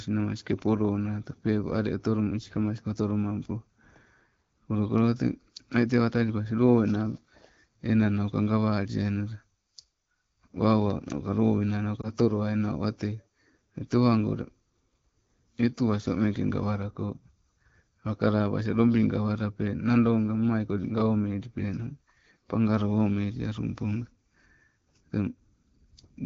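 Speech over an HD Voice (AMR-WB) call, which sounds clear. At 12.01 to 12.10 s there is a brief dip or warble from lost AMR speech frames. That fits one corrupted 20 ms frame. The decoder repeated the previous pitch and vocal tract settings at lower gain, then recovered.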